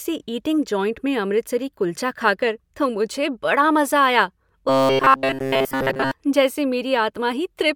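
From 4.69 to 6.11 s, just after "मुझे बड़ा मज़ा आया", the speech becomes a rigid, metallic buzz at 134 Hz. This is robotic sound from repeated short buffers. Almost nothing new gets through. The likely cause is late audio, with about 7.5 ms looped to fill the gap.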